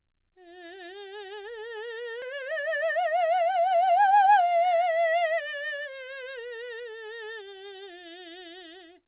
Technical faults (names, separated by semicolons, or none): skip ahead; jitter buffer speed-up